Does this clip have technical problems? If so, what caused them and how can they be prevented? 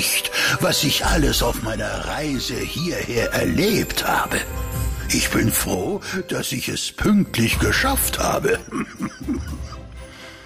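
Yes. The level drops abruptly by about 6 dB from 1.52 to 3.17 s, 5.75 to 7.01 s, and 8.62 s to the end. One channel likely drops out before the mono sum. Secure stereo cabling and connectors, and check both channels before summing.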